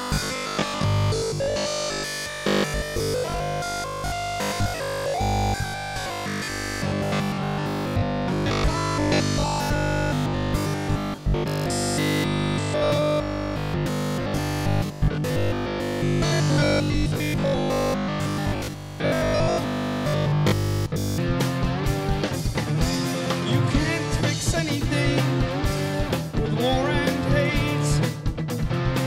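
From 0.02 to 21.18 s the audio has robotic sound from repeated short buffers: a rigid 50 Hz buzz, likely from repeating a 20 ms buffer, showing as evenly spaced spectrogram harmonics and a periodic waveform.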